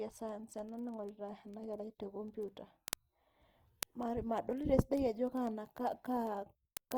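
A speech recording carries two distinct faults. Throughout, the voice sounds grainy and rough, with a noisy texture on sustained sounds. The top end is still intact up to about 20.3 kHz, so the sound is not muffled. This is likely Opus compression in its music-oriented CELT mode, at a rate that points to roughly 24 kbps. CELT preserves each band's energy and fills starved bands with folded or noise content. That gives roughness rather than the swirling, hollow spectral holes of low-rate MP3.

From 0.14 s to 6.97 s there are also word clock ticks: sharp, uneven clicks recurring at a steady pace of about twenty per second, roughly 150 in all. They come from a digital link read by a receiver on its own unsynchronised clock, off by a few hundred parts per million. Each slip drops or repeats one sample. The strict regularity, unrelated to the content, separates this from random crackle or packet-loss dropouts.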